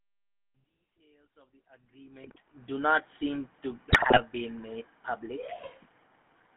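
Speech heard through the GSM full-rate codec from start to finish. The voice carries a buzzy, gravelly roughness and sits in a telephone band of about 200 Hz to 3.4 kHz. That buzz comes from resynthesis driven by regular pulses, which sets it apart from the watery smearing of modern low-bitrate codecs. GSM bit errors break in from 2.24 to 2.39 s and again from 3.9 to 4.21 s. Corrupted filter, pitch and gain values make the voice squawk, pop and gargle for a run of frames. Unlike packet loss, the sound is mangled rather than dropped to silence. The gradual fade-in at the opening, complete by about 2.78 s, is smooth and free of clicks.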